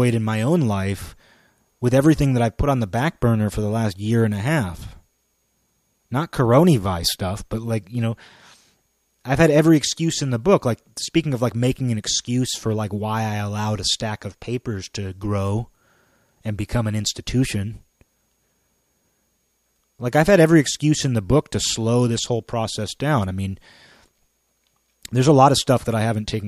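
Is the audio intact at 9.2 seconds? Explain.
Yes, the audio is intact at 9.2 seconds, with no fault present at that moment.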